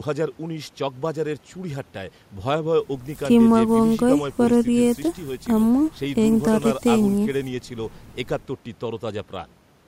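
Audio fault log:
Nothing stood out on listening to this speech recording.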